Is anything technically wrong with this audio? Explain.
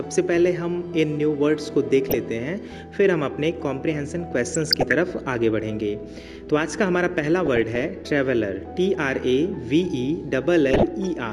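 Yes. DAB burbling occurs at 2.09 to 2.19 s, 4.51 to 4.93 s, 7.46 to 7.85 s and 10.71 to 11.07 s. Residual bit errors, a fraction of a percent and worst in the second burst, corrupt MP2 scale factors and samples, so individual sub-bands lurch in level frame by frame, giving watery blips or, where heavier, bubbling, chirping squelches over the sound.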